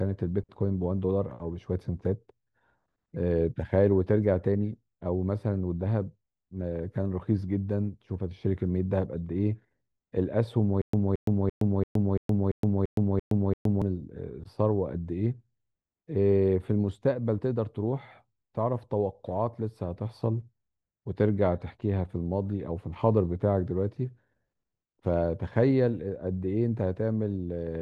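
Speech with a stutter with silent gaps from 10.82 to 13.82 s. A 222 ms fragment repeats nine times, separated by 117 ms of silence, most likely from a stalled stream.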